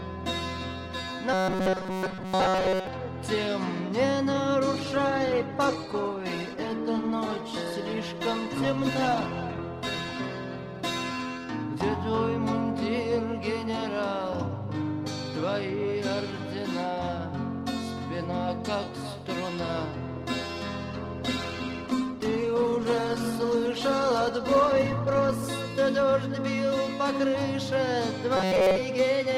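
From 1.33 to 2.87 s the sound collapses into a rigid, metallic buzz pitched at 188 Hz. This is robotic sound from repeated short buffers. The likely cause is audio arriving too seldom, so the player loops a fragment of about 5.3 ms, one period of 188 Hz, while most of the real audio is skipped. On a spectrogram, evenly spaced horizontal harmonics at multiples of 188 Hz replace the normal texture. The waveform shows a short cycle copied over and over. The same buzz returns briefly from 28.37 to 28.79 s.

Between those events come two call bitrate drops. From 4.74 to 12.98 s the encoder rate falls from 128 to 17 kbps and stays at its lowest for about 4.7 s. From 20.9 to 25.54 s it falls from 128 to 16 kbps, with about 4.6 s at the bottom. At these rates the coding turns coarse, so the sound becomes muffled and watery. On a spectrogram the upper band goes dark above a sharp ceiling, and the remaining detail looks blocky and smeared until the rate recovers.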